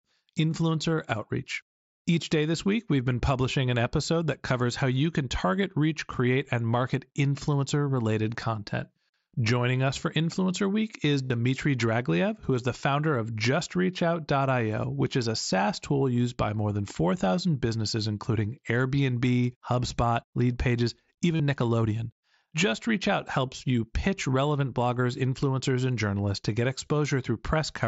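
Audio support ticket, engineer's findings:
Concealed Bluetooth headset packet loss, 3 events. 6.48 s, between "can target reach create" and "and market influencer related": one 7.5 ms gap, near-invisible patch. 11.25–11.30 s (52.5 ms) and 21.36–21.40 s (37.5 ms): buzzy held tone at full level, slight warble on recovery. Cause: lost headset-to-phone packets, gaps refilled by repeating the best-matching recent waveform. Unlike a dropout, the level never falls to silence and there's no click. mSBC wideband path audible underneath, 8 kHz ceiling.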